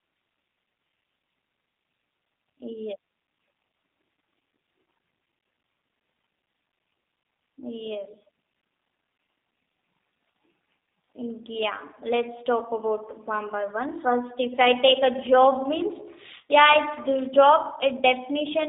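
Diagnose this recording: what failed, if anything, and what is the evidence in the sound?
The speech has been through a G.729 codec at the codec stage for the whole clip. Everything sits between 200 Hz and 3.7 kHz, and the rough, synthetic edge is plainly audible, consistent with 8 kbit/s, where the speech is rebuilt from a vocal-tract model, pitch predictor and sparse pulses.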